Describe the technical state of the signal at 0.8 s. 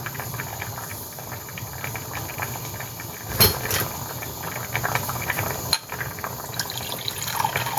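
Gain pumping is present at 0.8 s and throughout: the gain swings by roughly 5 dB, likely from excessive gain hitting a fast limiter that squashes the sound.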